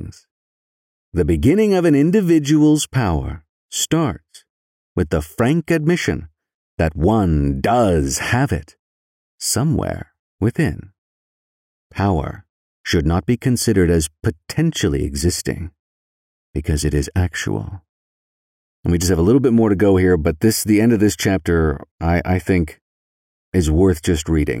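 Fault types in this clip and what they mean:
No faults can be heard anywhere in this speech recording.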